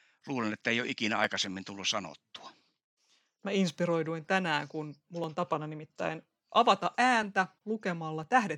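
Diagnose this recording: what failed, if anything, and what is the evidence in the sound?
Periodic USB or driver dropouts at the driver stage: ticks once a second from 0.24 to 8.23 s, each skipping about a millisecond of speech, which appear as thin vertical broadband lines on a spectrogram.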